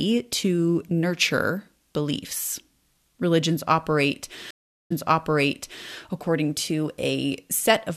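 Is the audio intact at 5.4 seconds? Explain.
No. At 5.4 s the clip is inside a stream reconnect that runs from 4.51 s to 5.90 s. The connection dropped, the player went silent for 0.4 s, then reconnected and started a fresh decoder mid-stream. Because the server resent a burst, the speech resumes 1.0 s earlier than where it broke off. At 5.4 s the listener is hearing material repeated from before the dropout, and normal continuity returns with "according to".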